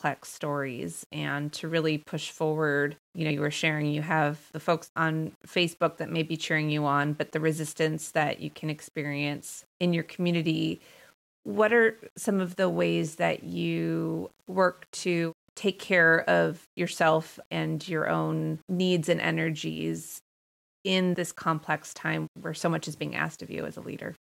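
From start to finish the speech carries a grainy distortion that rises and falls with the sound itself, most noticeable on quiet syllables and decaying word endings, where the texture turns rough and the faintest passages sputter or drop out. The likely cause is low bit depth without dither: samples rounded to coarse steps, which fits roughly 8-bit resolution, leaving a signal-correlated error only about 35 dB below the speech.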